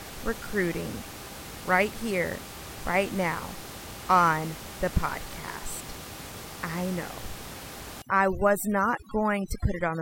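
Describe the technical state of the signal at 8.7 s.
At 8.7 s the signal is inside a stretch of overdone noise removal running from 8.02 s to the end at 10.01 s. Noise reduction set too strong gates frequency bands near its noise estimate, so the room noise, about 14 dB below the speech, collapses into near silence with twinkling specks. Quiet speech components vanish too. A spectrogram shows a blotchy, holed background with isolated flecks.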